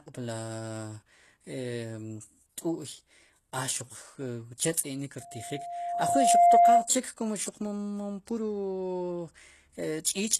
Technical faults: HE-AAC compression; loudspeaker feedback squeal

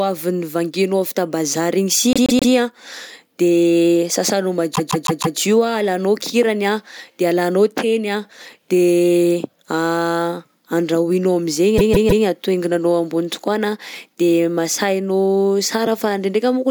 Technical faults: repeated frames

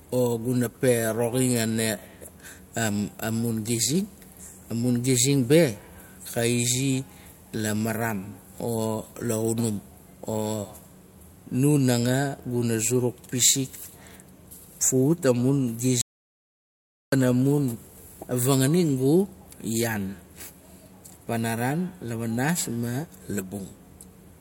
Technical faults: audio dropout to silence

